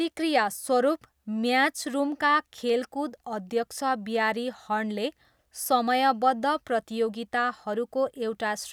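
No technical faults are audible.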